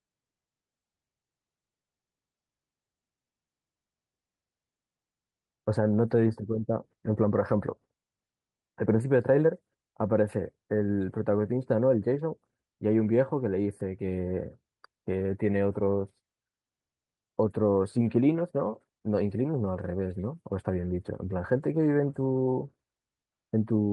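Nothing stood out as a technical fault on listening to this speech recording.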